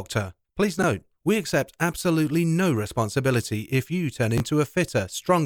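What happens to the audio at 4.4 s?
Chunks out of order from 4.38 to 4.40 s: one 11.6 ms chunk plays a chunk late, causing a brief jumbled moment, visible as abrupt waveform discontinuities and vertical spectrogram streaks.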